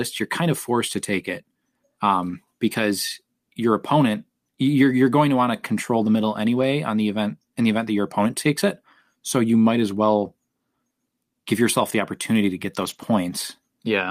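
Around 2.25 s, just before "because your opponent you're", then at 6.57 s after "to control the middle", and at 12.81 s after "the opportunity to get", the speech goes briefly rough and noisy with no gap: lost packets rebuilt from error correction, decoded from low-bitrate backup copies.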